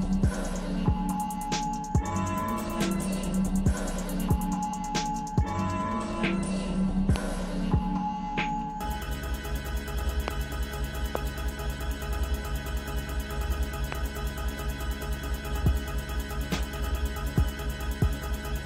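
The audio carries four loud pops, at 7.16–7.18 s, 10.28–10.30 s, 11.15–11.17 s and 13.92–13.95 s, each a single sharp hit standing about 15 dB above the surrounding signal for the first and about 20 dB for the other three, with the sound continuing underneath. The likely cause is a sudden voltage step from a plug, switch, static or driver glitch. On a waveform each shows as a brief spike; on a spectrogram, a thin vertical broadband stripe.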